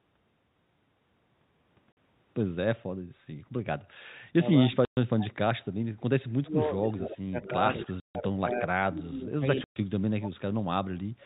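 Packet loss filled with silence first appears at 1.92 s: a 50 ms hole with hard edges where lost packets were replaced by nothing. Its length, like the later gaps, fits 10 ms packets dropping out in a run.

Speech suppressed in double talk follows at 4.1 s as a brief dip of about 20 dB, then returns from 4.56 s to the end. Over roughly five seconds of that span the speech sinks by up to about 30 dB, likely because an echo canceller mistook overlapping talk for echo and attenuated it.

Packet loss filled with silence cuts in again at 4.85 s for 120 ms.

Echo leak appears at 6.83 s, 7.43 s and 7.81 s as short delayed copies of the speech trailing it by 241 ms, about 10 to 20 dB below the direct sound. Far-end loudspeaker pickup was likely not fully cancelled.

More packet loss filled with silence leaves a 150 ms gap at 8.0 s and a 120 ms gap at 9.64 s. Throughout, the G.711 telephone coding limits the band to below 4 kHz.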